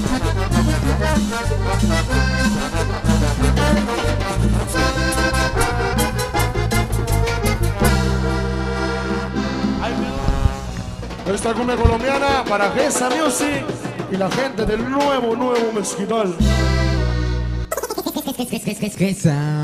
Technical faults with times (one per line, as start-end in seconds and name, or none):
0.48-1.13 drift correction step
5.93-7.89 drift correction step
10.67-12.83 drift correction step
16.97-18.78 drift correction step